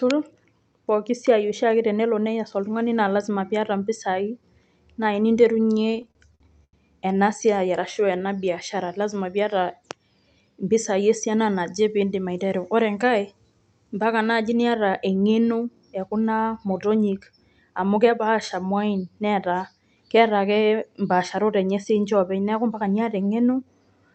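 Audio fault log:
5.67–6.76 s, repeated stalls (stutter): Packets kept arriving late, so the jitter buffer ran dry eleven times and the receiver stretched the last sound to fill about 257 ms, with the longest gap 89 ms. Nothing is lost before "ena siai", but the speech drags and stutters.
7.87–8.50 s, jitter buffer slow-down: With its reserve running low, the buffer repeated single pitch periods to gain 69 ms. Between "ena siai" and "lazima piyata" the speech runs at 90% speed at unchanged pitch, sounding drawn out.
10.49–11.02 s, jitter buffer speed-up: Holding more audio than its target, the buffer cut short pitch-period pieces, about 50 ms in all, to lower the delay. The speech runs at 109% speed at the same pitch and sounds hurried, with nothing above the call codec's 8 kHz band limit.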